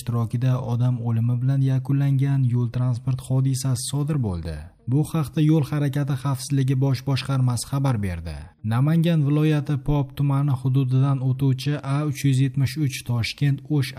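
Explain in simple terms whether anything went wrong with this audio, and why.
Nothing went wrong here.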